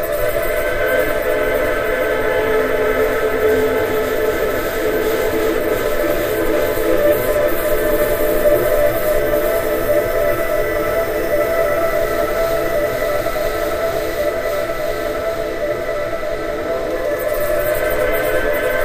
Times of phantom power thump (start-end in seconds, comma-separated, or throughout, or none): 14.22-14.45